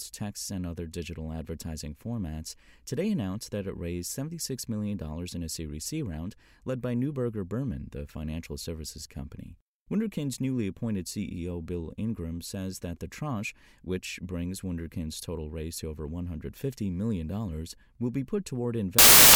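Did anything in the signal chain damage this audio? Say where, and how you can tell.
Yes. At the sample-format conversion stage, samples built from the wrong bytes run from 18.99 s to the end at 19.35 s: each sample's bytes were misassembled, so rapidly changing low bits dominate. It sounds like loud, harsh broadband noise, a dense noise block on the waveform and energy smeared across the whole spectrogram.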